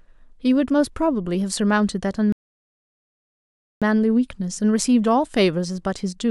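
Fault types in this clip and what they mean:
Rebuffering stall: playback starved of downloaded data at 2.32 s, leaving about 1.5 s of flat silence, a gap in waveform and spectrogram, before speech resumes unbroken at 3.82 s.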